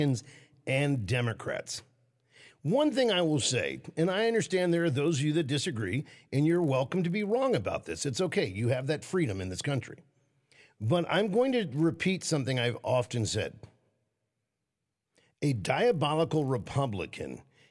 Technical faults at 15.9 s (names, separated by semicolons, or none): resampler restarted on every block